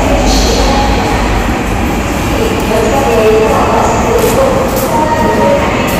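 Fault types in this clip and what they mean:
Hard clipping, throughout the clip: the sounds here are driven about 8 dB beyond what some stage in the chain can pass, so every peak that crosses the limit is sliced flat instead of completing its curve. Only a small share of the waveform, around one part in twenty, hits that ceiling, but those squared-off tops add harmonics high in the spectrum, heard as crackle on the peaks.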